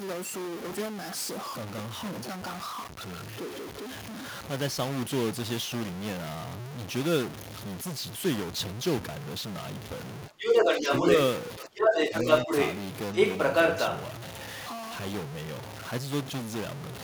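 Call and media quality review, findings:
Stuck bit: distortion through the whole clip, including quiet passages; pauses filled with a steady noise floor instead of silence. Likely cause is a converter or data line with one bit held fixed, offsetting roughly half the samples by that bit's weight. Unlike clipping, it doesn't track loudness: the grit stays on soft sound and fills the gaps, where clipping would leave pauses clean.

Speech suppressed in double talk: talker dips at 10.28–11.06 s and 11.6–12.27 s, about 15 dB at the deepest, around half a second of affected sound in each; a brief shallower dip of about 5 dB at 12.45–12.51 s. Likely the echo canceller attenuating during simultaneous speech. Unlike a network dropout, the level ducks rather than going fully silent, and it coincides with the second voice being present.

Other side's voice leaking through: a second voice audible at 10.39–11.16 s, 11.78–12.78 s and 13.14–14.0 s, around 10 dB apart from the main talker's level. 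Likely far-end loudspeaker playback not fully removed by the echo canceller. Unlike crosstalk from another line, its first two stretches overlap the talker's suppression windows.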